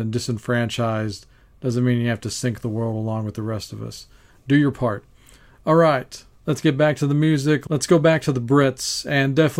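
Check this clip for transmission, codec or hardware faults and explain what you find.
No faults found.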